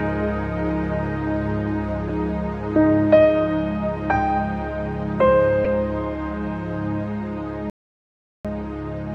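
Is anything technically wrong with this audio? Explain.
Yes, there are two kinds of fault. At 2.08 s and again at 5.64 s, there is a corrupt frame decoded. Flipped bits in a couple of compressed frames, then a few, were decoded anyway, so misread gains and codes put energy at wrong frequencies. Each is a brief chirp or blip.

From 7.70 s to 8.45 s there is an audio dropout to silence. The input was likely lost while the recorder kept writing silence. For about 0.75 s the sound cuts out to total silence, with no room tone, and then resumes mid-flow.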